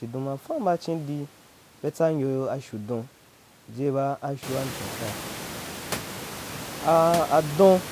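No technical faults occur in the speech; the room noise that rises around the middle belongs to the recording itself.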